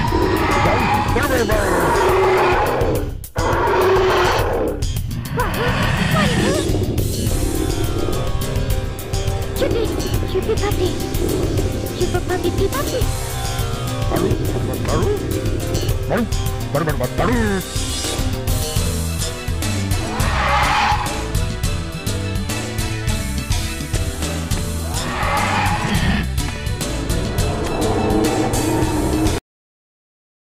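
At 29.38 s the sound stops mid-event. This is a cut-off end: the final buffers never played, leaving abrupt digital silence with no natural decay.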